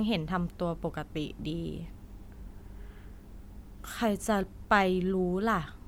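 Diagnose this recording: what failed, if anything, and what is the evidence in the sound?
Nothing failed: across the whole speech recording there is no audible evidence of a fault at any stage of the chain.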